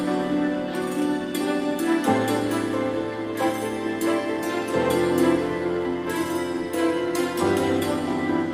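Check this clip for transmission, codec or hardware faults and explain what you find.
No faults detected.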